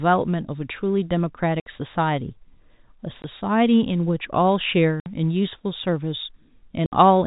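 Packet loss filled with silence hits at 1.60, 3.22, 5.00 and 6.86 s, leaving hard-edged holes of 60, 20, 60 and 60 ms, which fits lost 20 ms packets.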